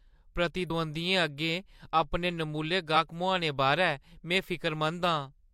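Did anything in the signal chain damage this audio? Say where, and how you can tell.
Yes. Damaged data in the compressed stream, at the codec stage, breaks the speech at 0.66 to 0.71 s and 2.92 to 2.96 s. The decoder misreads the corrupt frames and loses sync. A spectrogram shows brief disruptions, and the waveform shows abrupt discontinuities.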